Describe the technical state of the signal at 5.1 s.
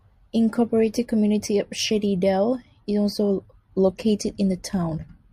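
At 5.1 s the speech sounds slightly dull at the extreme top, from channel delay (comb filtering) running from 2.29 s to the end: one channel lags by about one sample, so the mono sum cancels near 20 kHz.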